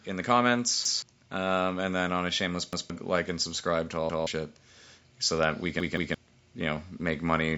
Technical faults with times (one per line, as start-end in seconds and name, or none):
0.85-1.02 repeated buffer
2.73-2.90 repeated buffer
4.10-4.27 repeated buffer
5.80-6.14 repeated buffer